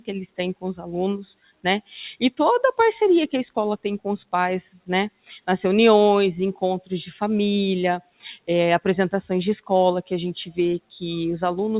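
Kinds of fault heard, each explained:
Noise suppressor applied to music or sounds, throughout: a speech-tuned suppressor mistakes sustained sound for noise, so levels pump by roughly 10 dB while attacks survive.
Sound cut by the noise suppressor, at 1.35 to 1.65 s, 5.1 to 5.48 s and 8.01 to 8.48 s: held sound is judged noise and sinks by about 20 to 21 dB.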